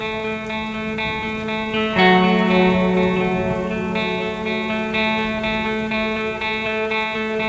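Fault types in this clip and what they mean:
There are no fault types in this music clip.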